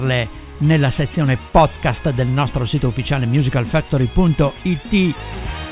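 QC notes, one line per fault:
Nothing stood out on listening.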